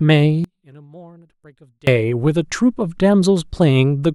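From 0.44 to 1.87 s the speech nearly vanishes, dropping about 28 dB. The likely cause is one channel inverted, so the shared centre cancels in mono.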